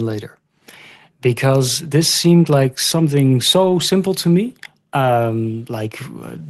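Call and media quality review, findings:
Lost packet rebuilt from error correction, twice: 3.61–3.71 s, right after "like something" and before "simple to me", and 5.01–5.11 s, just after "simple to me". No gap, but each stretch turns briefly rougher and noisier, around 60 ms of low-bitrate in-band FEC copy standing in for what sounds like three lost packets, decoded through the Opus call path.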